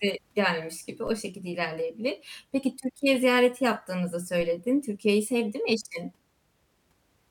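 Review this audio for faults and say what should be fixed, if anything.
Two DC steps thump in the speech, at 1.07 s after "gelmiş gibi" and at 4.41 s after "ziyareti yaptığınızı". Each time the zero line jumps by about -33 dBFS, then drains away through a roughly 5 Hz high-pass. Prevent it by gating offset-carrying inputs before switching.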